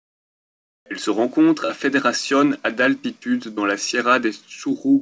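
From the start to 0.86 s there's comfort noise in place of the background: a flat, featureless hiss about 24 dB quieter, likely discontinuous transmission before the speech kicks in.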